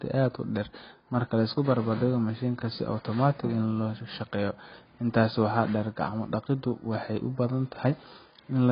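Speech throughout, with nothing above 5 kHz and a dull, smeared character from start to finish, the likely result of heavy AAC compression. The fizzy, warbling texture on sibilants and held sounds fits AAC-LC at a low bitrate around 16 kbps. At that rate the encoder cannot spend bits on the upper band, so it drops the cut-off and quantises the remaining spectrum so coarsely that gaps and substitute noise become audible.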